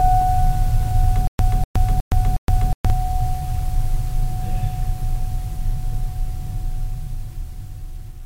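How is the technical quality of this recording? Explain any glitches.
The music has one clear playback glitch. From 1.27 to 2.9 s there is a stutter with silent gaps: a 246 ms fragment repeats four times, each followed by 118 ms of dead silence, likely from a stalled stream replaying its last buffer. The strict 364 ms rhythm and the repeated fragment set it apart from random dropouts.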